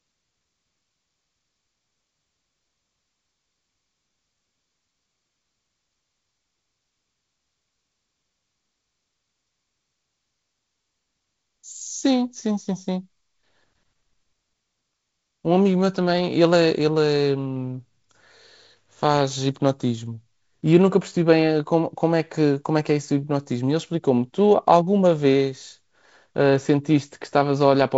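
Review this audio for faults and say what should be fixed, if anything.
Nothing needs fixing: the speech has the band-limited sound of G.722 wideband telephone coding, with no content much above 7 kHz and the light hiss and slightly noisier lower band that fit the codec's 48 kbit/s mode, and no fault appears anywhere in the signal.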